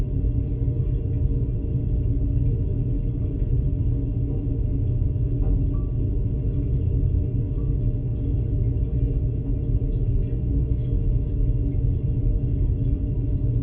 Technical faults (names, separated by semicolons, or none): none